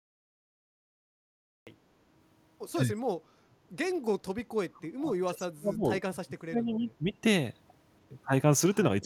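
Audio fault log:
0.00–1.67 s, cut-off start. The clip holds digital silence until 1.67 s. Speech then enters mid-sound, with no natural attack or fade-in. The capture began late, after the talker had already started, so the opening of that sound is missing.
4.62–5.85 s, 6.22–7.04 s and 9.01–9.05 s, speech suppressed in double talk. The speech sinks sharply, by roughly 30 dB, then 35 dB, then a brief 10 dB dip at the end. This is likely an echo canceller ducking its own talker while the far side spoke.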